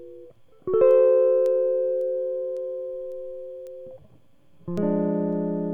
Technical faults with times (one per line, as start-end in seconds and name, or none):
0.36-5.33 word clock ticks